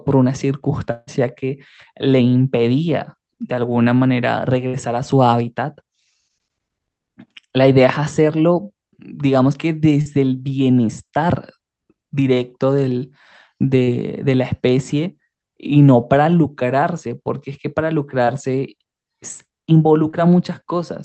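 From 0.91 to 1.09 s, about 160 ms of sound is replaced by a held continuation that fades but never reaches silence. A long network dropout is the likely cause, and this gap is longer than any that follows.

At 4.67 to 4.75 s, a burst of packet loss removes about 60 ms. It sounds like a shorter buzz or hiss that fades before the audio picks up further along.

Short concealed packet loss covers holes of 20 to 40 ms at 10.01 to 10.07, 13.83 to 13.89, 18.25 to 18.29 and 20.11 to 20.15 s. Each blends straight back in, so it registers as a brief smear or wobble rather than an audible fade.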